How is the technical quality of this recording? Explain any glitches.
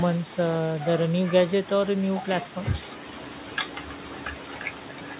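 No glitches; speech arrives through a narrowband call path.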